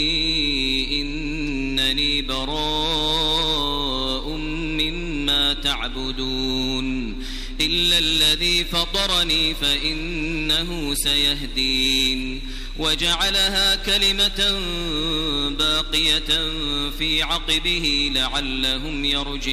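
No technical faults can be heard anywhere in the audio; the signal stays steady and intact throughout.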